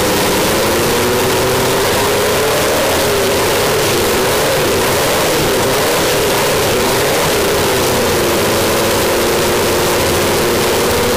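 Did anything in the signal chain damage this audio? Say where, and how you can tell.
Yes. A float read as integer fault runs through the whole clip, from start to finish, at the sample-format conversion stage. The waveform sits almost square at an almost fixed, high level, so everything is very loud and harsh, and quiet background noise comes through as loud as the main sound, though pitch can still be followed. The likely cause is 32-bit float data being read as 32-bit integers, so each sample's sign and exponent bits set its level.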